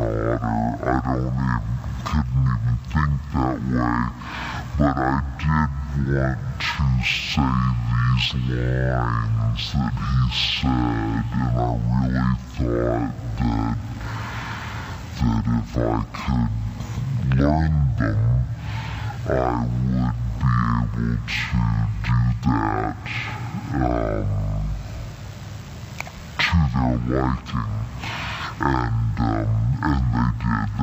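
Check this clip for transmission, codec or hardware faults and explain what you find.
One fault runs through the whole clip.

Stereo read as mono, present from start to finish: the interleaved left and right samples are taken in turn as one channel, so the sound plays at half speed and a full octave low, with a fainter mirrored copy in the upper half of the spectrum.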